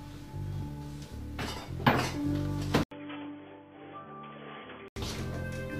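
At 2.83 s the input likely switched to a poorer device: after an 80 ms gap, the sound turns quieter and boxy, cut above 3.4 kHz, until 4.96 s.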